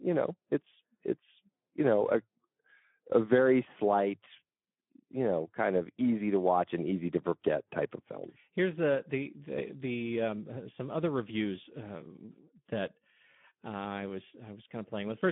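Throughout, the speech carries plainly audible Speex codec damage: hoarse, noisy CELP excitation at around 11 kbps, narrowband, with nothing above 3.8 kHz, unlike smoother, muffled band-limiting alone.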